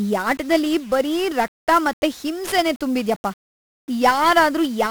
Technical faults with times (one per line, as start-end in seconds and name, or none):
0.00-4.90 1-bit DFPWM compression